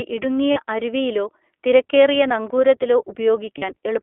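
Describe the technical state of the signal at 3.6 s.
Lost iLBC frames occupy 3.58 to 3.64 s. About 40 ms of sound is missing, which fits two 20 ms frames. The decoder repeats the last pitch cycle mixed with noise, giving a brief held, buzzy vowel. Speech recovers almost at once. Underneath, the iLBC codec is running. The band is limited to 300 Hz to 3.4 kHz. The coding leaves a plainly rough, synthetic edge.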